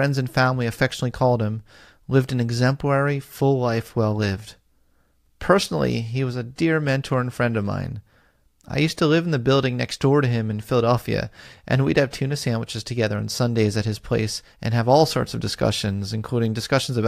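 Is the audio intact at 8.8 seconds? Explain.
Yes, at 8.8 seconds the speech plays through intact, with no audible dropout, glitch or other fault at that point.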